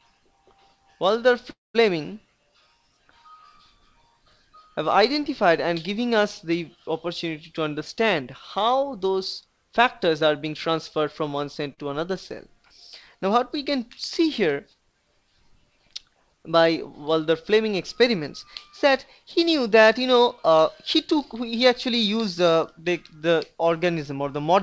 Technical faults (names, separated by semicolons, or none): call audio freeze; jitter buffer speed-up; short concealed packet loss